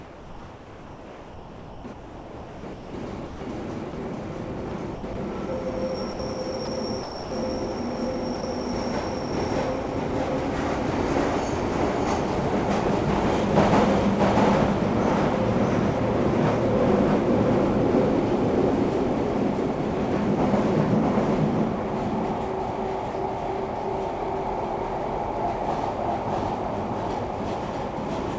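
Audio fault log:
Throughout: doubled audio track. A second full-band copy of the sound runs roughly 0.7 s behind the first, at about the same level. Each event is heard twice, with no decay or room colour on the trailing copy. That dryness rules out a real echo. The likely cause is a second, slower capture path mixed back in. Both copies share the call path's ceiling, with nothing above 8 kHz.
0.0–2.93 s and 4.69–5.15 s: sound chopped by the voice detector. The sender's detector switches on and off repeatedly in these stretches. Quiet parts of the sound are swapped for comfort noise, nearly all of the first stretch and a shorter share of the second. The result is choppy. Detector gating is the likely cause.
3.27–3.41 s, 3.91 s, 6.13–6.19 s, 6.65–6.67 s, 7.03–7.31 s, 8.41–8.43 s: sound dropped by the voice detector. Each time, quiet sound is taken for background and sending stops. Steady comfort noise fills the gap until the detector triggers again. 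The gaps range from very short to nearly 0.3 s, and the longest falls at 7.03 s. The sound briefly gives way to flat hiss, then returns. A detector misjudging quiet material is the likely cause.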